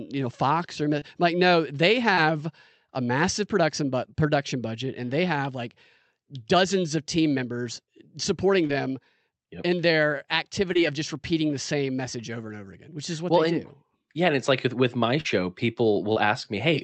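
Short concealed packet loss: audio packets missed the decoder at 0.99 s (just before "like no they"), 2.15 s, 8.67 s (after "of team members supporting"), 10.73 s, 15.21 s (after "like with with my") and 16.13 s. The receiver patched each gap by extending the preceding sound, leaving brief smears or wobbles about 20 ms long, stretching to about 40 ms in the last two.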